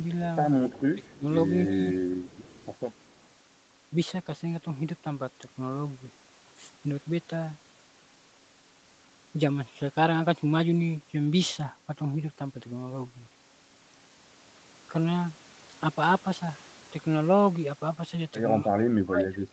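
At 0.73 to 0.77 s and again at 1.05 to 1.09 s, faint scraps of the speech return about 218 ms late and roughly 30 dB below the direct sound. This is an echo leak, likely from a far-end loudspeaker whose echo canceller let some of its pickup through. Longer stretches follow at 2.25 to 2.76 s (about 30 dB down) and 2.93 to 3.12 s (about 40 dB down). Unlike room reverberation, which trails off smoothly, this is a separate copy at a fixed delay.

Between 0.94 and 1.26 s the speech itself dips by up to about 25 dB. From 1.67 to 2.17 s it dips by about 20 dB. From 18.61 s to the end it dips by about 30 dB. This is speech suppressed in double talk, likely an echo canceller turning down the near talker while both sides spoke. A dropout goes fully silent, but here the speech sinks in pieces, tracking the overlap.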